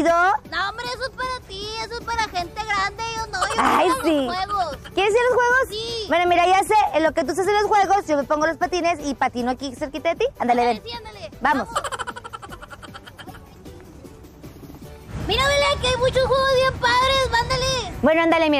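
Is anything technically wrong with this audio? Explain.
No, nothing technically wrong can be heard in this audio. Nothing in it needs a technical fix.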